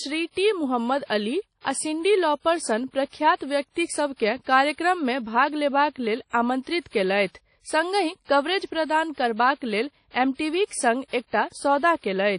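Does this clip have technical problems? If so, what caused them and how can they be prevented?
Yes. Throughout the speech there is ringing, washy coloration with hiss that rises and falls with the signal, and nothing above 10.1 kHz, which points to WMA compression at a low bitrate, likely around 32 kbps. Coarse quantisation of long transform blocks spreads noise and discards weak components. Encoding at a higher bitrate or with a modern codec prevents it.

There is also a pre-echo from 6.80 to 6.86 s, where a short hiss lasting about 58 ms precedes a sharp attack and softens it. The codec spread quantisation noise meant for the loud onset across the quiet part of the same block. Encoders that switch to short blocks on transients prevent it.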